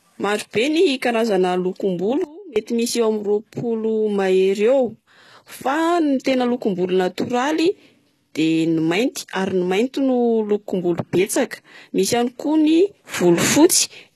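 Sudden gain jumps at 2.24 s and 13.14 s break up this speech clip. At 2.24 s the level drops abruptly by about 22 dB and stays down until 2.56 s, then snaps back. At 13.14 s it steps up by about 6 dB and holds to the end. The speech and the background noise shift together, with no fade. That points to the likely cause: a digital gain change applied between one sample and the next without a ramp. What is likely HE-AAC compression damage runs throughout: nothing is present above 12.3 kHz, and the treble below that has the gritty, metallic texture of bands copied upward from lower frequencies rather than coded directly. The sibilants turn gritty too, with harmonics that no longer line up across the crossover. This fits the plainly audible sound of spectral band replication at a very low bitrate, around 16 kbps.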